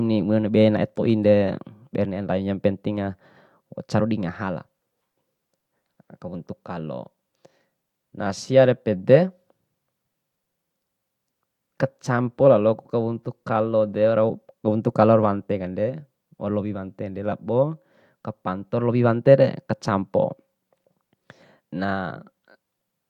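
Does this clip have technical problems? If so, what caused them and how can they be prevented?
No, this clip has no technical problems, so there is no cause to identify and nothing to prevent.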